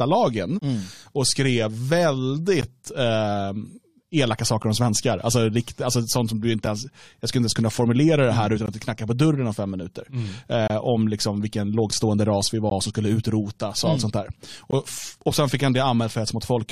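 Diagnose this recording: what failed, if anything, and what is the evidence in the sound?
Gaps between stream segments at the playback stage. Hard-edged silences of about 7 to 24 ms fall at 0.59, 2.61, 4.63, 6.66, 8.66, 10.68, 12.70 and 14.71 s, every 2 s. Segment timestamps leave holes the player pads with silence, showing as flat waveform notches and thin vertical blank stripes on a spectrogram.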